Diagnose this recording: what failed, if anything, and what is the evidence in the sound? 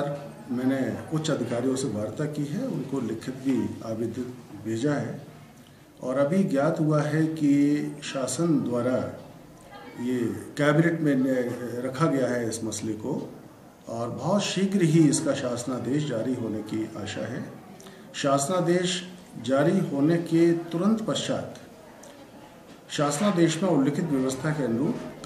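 Nothing failed at any stage of the chain: the signal has no dropouts, discontinuities, distortion or timing irregularities anywhere in the recording.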